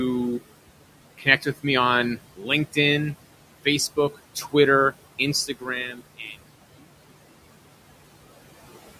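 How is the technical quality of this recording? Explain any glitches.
The recording has noise suppressor artifacts throughout and two places where the suppressor cuts into the speech. The room noise itself, about 16 dB below the speech, is part of the recording rather than a fault.

Noise suppressor artifacts run through the whole clip. The suppressor judges which frequency bands hold steady noise and lowers them frame by frame, by about 18 dB here. As a result, the background drops away between words and comes back up underneath them.

Speech cut by the noise suppressor occurs from 1.18 to 1.46 s, just before "with me on". The suppressor mistook part of the speech for noise and pulled it down with the background, by up to about 11 dB over roughly 150 ms. That stretch sounds swallowed.

The same fault returns from 2.36 to 2.48 s, right after "with me on". Speech energy was again classed as noise and attenuated, here by up to about 15 dB across roughly 100 ms, leaving that stretch sounding faint.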